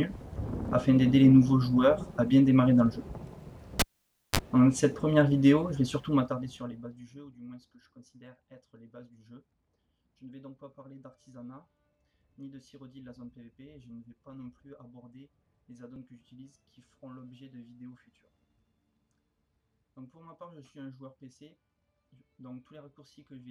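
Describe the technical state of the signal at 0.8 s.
At 0.8 s the signal is intact, with no dropout, distortion or other technical fault audible at that point.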